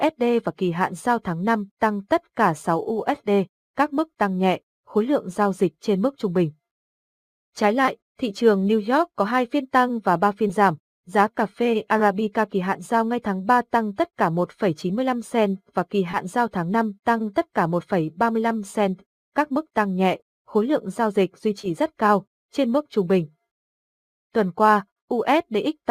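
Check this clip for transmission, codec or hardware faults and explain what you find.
Short concealed packet loss occurs five times, at 7.85 to 7.89 s, 10.47 to 10.51 s, 16.11 to 16.15 s, 20.17 to 20.21 s and 21.61 to 21.65 s. Each time about 20 ms of audio failed to reach the decoder in time, and the receiver covered the gap by extending the preceding sound, either repeating its pitch or substituting shaped noise, before blending back into the real signal. Each event is heard as a brief smear or wobble.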